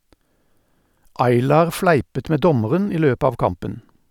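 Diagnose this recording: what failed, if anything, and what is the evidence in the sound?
No faults can be heard.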